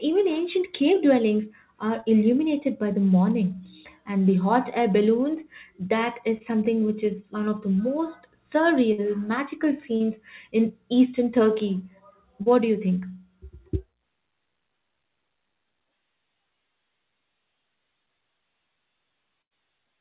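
It's a speech recording over a narrowband call line, with nothing above 4 kHz, which fits G.711 A-law. There's short concealed packet loss at 2.0, 6.38 (after "hot air balloons that"), 9.97 (before "in eastern") and 12.43 s (before "do you think"): about 30 ms dropped each time and patched over, leaving a quick smear or wobble. Then two bursts of packet loss at 8.92 and 19.42 s lose about 60 and 90 ms, heard as a fading buzz or hiss before the audio picks up further along.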